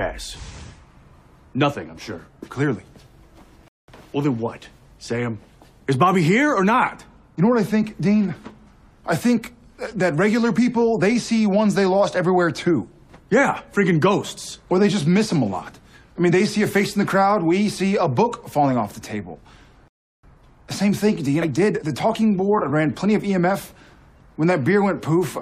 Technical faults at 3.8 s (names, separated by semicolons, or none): rebuffering stall